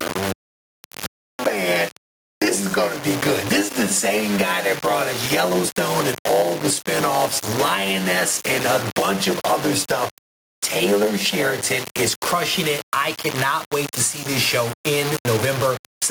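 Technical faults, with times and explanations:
Throughout, low bit depth without dither: there's a gritty, grainy edge riding on everything. The error sits around 15 dB below the signal, which is very coarse and fits a 5-bit signal that was simply rounded. With no dither, that error tracks the waveform, so the quiet stretches get the roughest and the faintest bits crumble or sputter between steps.
Throughout, gain pumping: the level keeps breathing, ducking hard, by around 10 dB, the moment anything loud comes in. Loud and soft parts end up squeezed toward the same level, so it all feels flattened. That's most likely the input gain cranked far too high for the mic, with a fast limiter or compressor yanking it back down on every peak.
0.0 to 12.08 s, block size mismatch (padded): a 100 Hz buzz runs under the sound for this stretch, and the sound drags at about 0.92 times normal speed, roughly 8% slow, while the timbre stays. 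That combination points to one stage handing over shorter blocks than the next one reads, with the leftover filled by zeros. Each block gets a little silent gap, and those gaps repeating 100 times a second make the buzz and stretch the timing.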